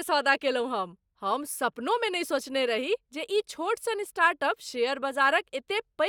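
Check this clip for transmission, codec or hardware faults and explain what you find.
I hear no faults anywhere in this speech recording.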